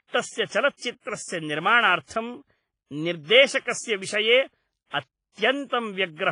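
Throughout, the speech rings and smears, with hiss swelling alongside it and nothing above 10.4 kHz. This is likely WMA compression, and it sounds washier than a plain low-pass.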